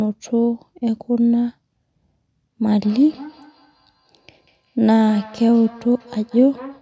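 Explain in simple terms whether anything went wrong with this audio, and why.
Feedback echo between two devices starts at 2.82 s and runs to the end of the recording. Two devices in the same room were on one call, so one played out what the other's microphone had sent, and that microphone picked it up again. Each device's echo canceller only removes its own playback, so this loop got through. Each word returns as a faint, thinner copy roughly a fifth of a second later.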